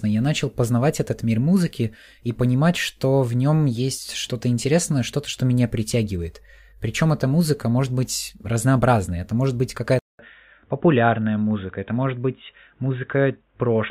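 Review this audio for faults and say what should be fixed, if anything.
At 9.99 s, right after "разнообразной это может быть", a gap of about 200 ms is followed by speech with nothing above 3.8 kHz until the end. The level stays about the same, but a faint new background noise appears. This is likely an input switched to a poorer device, such as a headset's call profile. The silence at the switch and the changed noise floor distinguish it from a simple low-pass filter or a codec bandwidth drop. Lock the recording input so the system cannot change devices mid-session.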